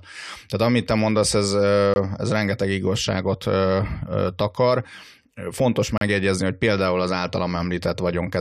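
Twice the timestamps of consecutive stream segments fail to meet, leaving a gap between stream segments that the player fills with silence. At 1.94 s a hole of about 21 ms cuts the speech, and at 5.98 s a longer one of about 34 ms follows. Both have hard edges. Their spacing of roughly 4 s fits a 4-second segment length. No audio is lost; the speech simply pauses abruptly, then resumes.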